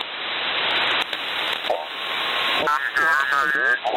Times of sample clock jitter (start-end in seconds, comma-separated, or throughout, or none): 1.01-3.55